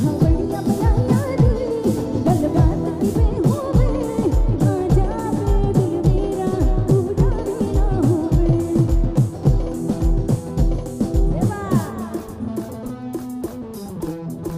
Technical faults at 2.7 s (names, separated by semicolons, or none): none